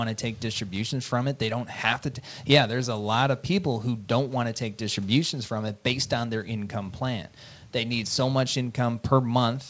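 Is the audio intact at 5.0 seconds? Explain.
Yes, the audio at 5.0 seconds is intact, with nothing there beyond the faint room noise about 40 dB under the speech and the call codec's band limit at 8 kHz.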